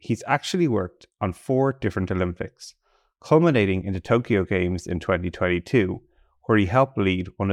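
Nothing in the speech stood out as a technical problem on listening.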